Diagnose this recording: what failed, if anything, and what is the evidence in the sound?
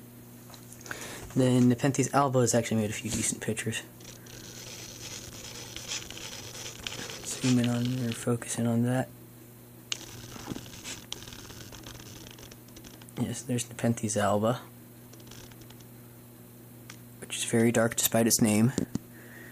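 Codec trouble: corrupt frames got decoded anyway, giving short blips at 5.64–5.69, 14.20–14.23 and 18.05–18.07 s, each a couple of frames with energy misplaced in frequency.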